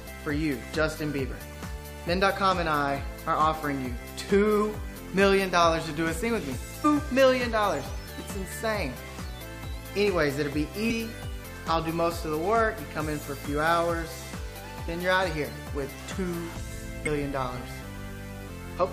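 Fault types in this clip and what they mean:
Damaged data in a compressed stream: Corrupted bytes make the decoder misread frames, lose sync and hunt for the next frame header. Each event sounds like a brief blip or chirp, at 6.84 s, 10.90 to 10.92 s, and 17.06 s, each lasting about 20 ms.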